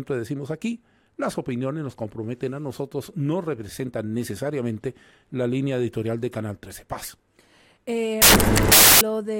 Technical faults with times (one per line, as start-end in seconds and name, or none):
8.22-9.01 samples built from the wrong bytes